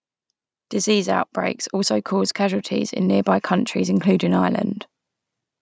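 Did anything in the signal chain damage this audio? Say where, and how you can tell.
Yes: automatic gain rising from 0.84 s to 4.59 s, in the call processing stage. The speech and the background noise swell together by about 7 dB over those seconds, which shows the gain control judged the input too quiet and slowly raised its overall level.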